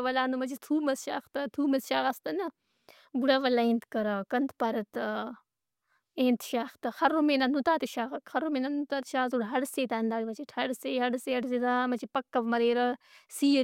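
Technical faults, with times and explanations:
Nothing technical trips up this speech recording anywhere along the way, so there's no fault to list here.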